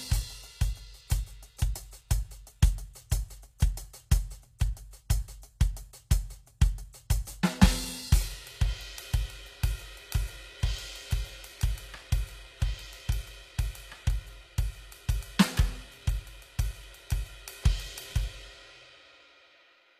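The music appears to have gone through a low-bitrate encoder that coded only the lower spectrum and rebuilt the treble from copied bands. This is likely HE-AAC compression, and the plainly audible damage fits roughly 24 kbps. The top end sounds gritty and metallic, and nothing remains above 14.9 kHz.

At 3.10 s and again at 4.59 s, sharp attacks land late in a transform block. The codec spreads the noise meant for the loud hit back into the quiet moment before it. This pre-echo shows up as a short hiss about 17 ms and 15 ms ahead of each attack, softening and smearing the onset.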